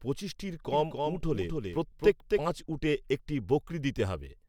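From 0.72 s to 2.38 s, just before "পাঁচ উটে একটি", the speech is shadowed by a second, full-band copy of itself trailing roughly 300 ms behind and sitting around 5 dB below the original. It has no reverberant tail or room colour, and it appears and disappears abruptly at those edges. This is a doubled audio track, likely caused by the same signal reaching the mix a second time through a slower path.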